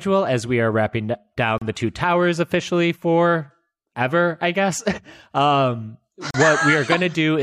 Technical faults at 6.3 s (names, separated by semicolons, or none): Bluetooth stall